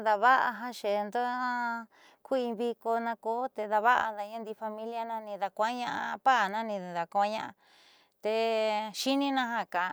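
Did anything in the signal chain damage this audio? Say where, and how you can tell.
No, nothing along the chain seems to have touched this speech recording, so there's no damaged stage to point to here.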